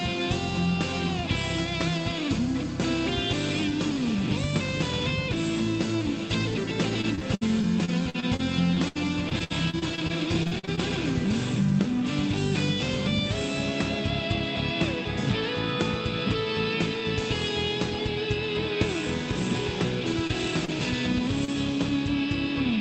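From 7.01 to 10.79 s the audio turns choppy and robotic from repeated packet loss: 23 gaps, the longest 73 ms, were patched by extending the previous sound, leaving stuttering, repeated-looking spectrogram slices. Short concealed packet loss then causes brief smears at 20.27–20.31 s, 20.65–20.70 s and 21.45–21.50 s. Throughout, the call codec's top edge sits at 8 kHz, which fits Opus at around 32 kbps.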